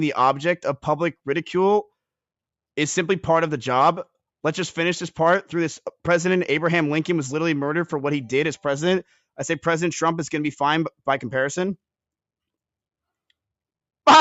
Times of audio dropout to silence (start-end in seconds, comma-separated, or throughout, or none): none